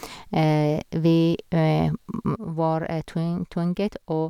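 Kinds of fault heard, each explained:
One channel drops out: From 2.36 s to the end, one side of the stereo pair likely stopped carrying signal, so the mono sum keeps only the remaining channel. The speech, common to both sides, abruptly falls by about 6 dB and stays quieter.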